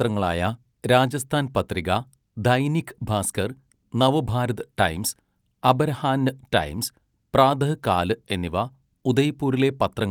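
Nothing in this speech recording stands out as a technical fault. With no events to place in time, there is nothing further to describe.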